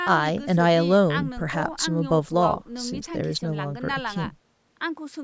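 Speech, with no technical faults to report. It has passed through call microphone processing, so the content stops at 8 kHz and the lowest bass is trimmed by the high-pass filter, as expected for a call path.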